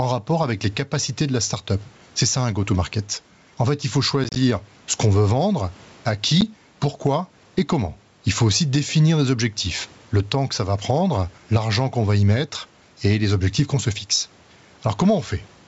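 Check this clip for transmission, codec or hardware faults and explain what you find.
Two faults show up in this speech: constant gain pumping and a couple of packet-loss dropouts typical of an ADPCM call.

Gain pumping runs throughout. The level swings by around 10 dB, likely from gain set too high into a fast limiter, so loud and soft parts end up closer in level.

The ADPCM packet loss first hits between 4.24 and 4.38 s, where about 60 ms goes missing in hard-edged holes scattered over 120 ms, the longest lasting 30 ms, which points to several lost packets. A single 10 ms hole follows at 6.41 to 6.43 s. Each time, the decoder's predictor and step size lose track of the sender's, so speech comes back slightly distorted and settles over some tens of milliseconds. Apart from these gaps, the G.722 wideband coding at 64 kbit/s adds no more than faint damage.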